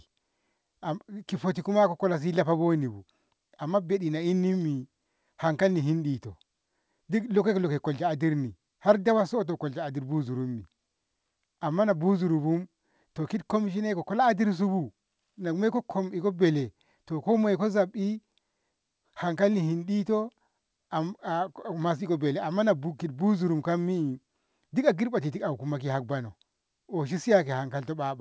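No technical faults occur at any point in the speech, so there is nothing to place in time order.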